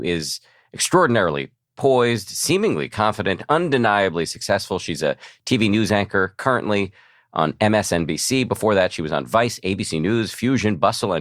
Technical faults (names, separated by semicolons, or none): none